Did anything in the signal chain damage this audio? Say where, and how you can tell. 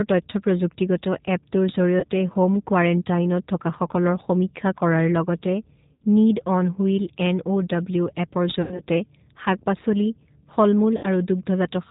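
Yes. At the codec stage, G.729 coding damage runs through the whole speech clip. Nothing above 4 kHz survives, and the voice has a rough, synthetic buzz from the sparse pulse excitation. A spectrogram shows a hard ceiling at 4 kHz and grainy, smeared harmonics.

On the network side, VoIP packet loss concealed by the speech codec occurs at 2.00–2.07 s, 5.94–6.03 s, 8.62–8.82 s and 10.97–11.06 s. The losses run about 30, 60, 90 and 60 ms, which fits one to three lost packets. The decoder extends its last pitch and filter while lowering the gain, so each gap becomes a fading buzzy tone or coloured noise. On the waveform this looks like a repeated, shrinking tail, and on the spectrogram like flat streaks that are followed by weak speech.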